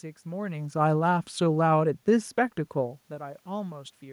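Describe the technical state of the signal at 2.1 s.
The speech and the room noise behind it are sinking together here, mid-way through a gradual fade. This is automatic gain falling, running from 0.66 to 3.03 s: the gain control judged the input too loud or its background noise too strong and eased its gain down by about 4 dB.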